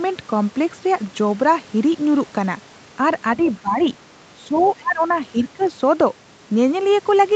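The speech dips slightly at 3.37 s, then a faint second voice, about 25 dB below the talker, slips in at 3.43–3.52 s. The talker sinks again at 3.60–3.81 s by about 15 dB. These are speech suppressed in double talk and the other side's voice leaking through, likely because the echo canceller, with both sides talking at once, could not tell the talker from the loudspeaker echo. It turned the talker down but still let scraps of the far voice past.

The pattern repeats. From 4.49 to 5.02 s the talker drops by about 20 dB, and a far-end voice pokes through at 4.55–4.70 s. At 5.32–5.62 s another dip of about 15 dB hits the speech. Brief leaked fragments appear at 5.41–5.46 s, about 25 dB down, and at 5.62–5.68 s, about 30 dB down. Over the Opus call path, with its top end stopping near 8 kHz, the leaked voice sounds faint against the ducked talker.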